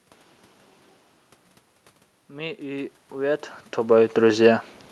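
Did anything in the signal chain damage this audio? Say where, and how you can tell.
Yes, in call processing: from 2.28 to 4.44 s the automatic gain rising pulls voice and room noise up together by about 7 dB after the input dropped roughly 15 dB.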